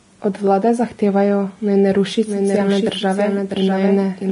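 Throughout, the speech sounds heavily grainy and hissy, with nothing above 10.5 kHz, likely from Vorbis compression at a low bitrate, consistent with about 29 kbps. From 2.25 s, just after "zahtevajo naj ne ruši", a somewhat quieter copy trails about 0.7 s behind until the end, likely a doubled audio track.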